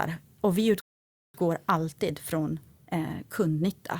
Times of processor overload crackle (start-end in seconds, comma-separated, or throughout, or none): none